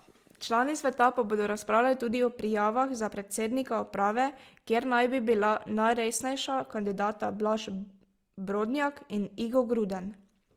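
From start to finish the speech has a rough, grainy texture: upper bands sound noisy rather than clean, though the bandwidth stays wide. That's likely Opus compression in its music mode, where starved bands get refilled with noise or folded copies, which fits a rate of around 24 kbps.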